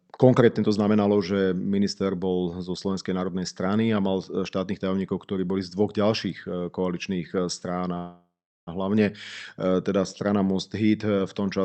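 Call audio freeze from 7.97 to 8.69 s, right after "e koaličných e strán": the speech stalls into a fading buzz that then sits in silence for about 0.38 s. This is likely packets arriving late and emptying the jitter buffer. Speech then resumes where it stopped, roughly 0.7 s later, with nothing lost.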